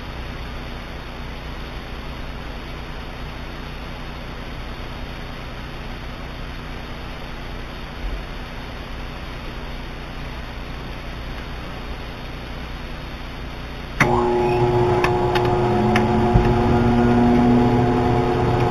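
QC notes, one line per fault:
Throughout, imaging from linear upsampling: the content stops near 4 kHz, which points to an 8 kHz source raised to 44.1 kHz by straight-line interpolation between samples. That crude interpolation removes little of the mirrored spectrum, so a faint copy sits between 4 and 8 kHz, roughly 25 dB below the main band. It is heard as a thin metallic shimmer over a dulled top. On a spectrogram it shows as a ghostly reflection of the lower band, flipped at 4 kHz.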